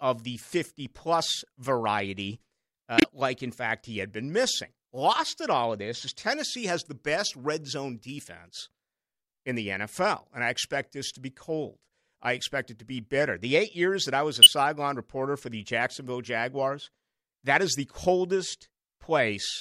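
Speech clip with two kinds of damage in its compressed stream. The first is a corrupt frame muted: flipped bits made the decoder reject data, and the player filled the gap with silence. At 2.98 s the sound cuts out abruptly and stays silent until 3.04 s. That 66 ms hole points to two consecutive frames being dropped, and the speech resumes on time afterwards. The second kind, corrupt frame decoded, happens twice. In each case the decoder accepted a damaged frame and played it, so misread gains and codes put energy at the wrong frequencies. From 13.20 to 13.22 s a single frame produces a short burst of misplaced energy peaking at about -20 dBFS. From 14.42 to 14.47 s roughly two frames give a louder error that peaks at about -5 dBFS.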